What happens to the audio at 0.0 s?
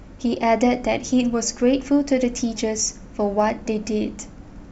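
Nothing goes wrong at 0.0 s; the audio is intact at that point.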